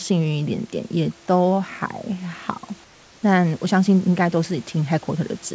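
Speech recorded over a call path that carries nothing above 8 kHz, with room noise beneath it. From 2.84 to 3.23 s, the real background gives way to comfort noise. It is a smoother, featureless noise, about 3 dB quieter. The likely cause is discontinuous transmission. The sender paused during silence, and the receiver filled those 390 ms with synthetic noise.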